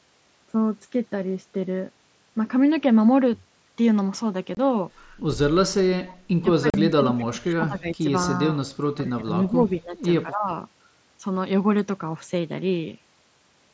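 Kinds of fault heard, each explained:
Unconcealed Bluetooth headset packet loss: Short blocks of audio between headset and phone never arrived, and nothing was patched in, so the sound simply stops with hard edges. A hole of about 23 ms at 4.55 s and one of about 38 ms at 6.70 s fit runs of three and five 7.5 ms mSBC frames. On a waveform each shows as a flat, near-silent gap with abrupt walls; a spectrogram shows a thin vertical blank band across the 8 kHz range.
Speech suppressed in double talk: The talker's level sinks while, likely, the far end was speaking at the same time and the echo canceller clamped down on both. It happens from 6.6 to 8.05 s, 8.96 to 9.98 s, and 10.24 to 10.5 s, with the deepest dips around 20 dB in the first two and about 15 dB in the last. The waveform envelope pinches in irregular chunks, and the spectrogram fades.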